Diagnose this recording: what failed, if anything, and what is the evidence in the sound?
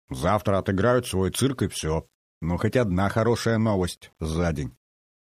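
Low bit depth without dither throughout: grainy distortion tracks the sound, about 45 dB below it, fitting roughly 9-bit rounding, likely introduced at a sample-format conversion stage.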